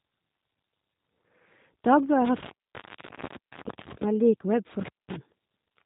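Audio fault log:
throughout G.729 codec: the sound is rough, slightly synthetic and capped around 4 kHz, with plainly audible damage. Each 10 ms frame is rebuilt from a vocal tract filter, a pitch predictor and a few pulses, which fits an 8 kbit/s VoIP stream.
2.25–4.05 s and 4.80–5.16 s intermittent contact: the sound drops out with crackle at the edges, leaving faint hiss, for about 1.4 s in the first run and 0.2 s in the second. A loose cable or plug is briefly opening the line.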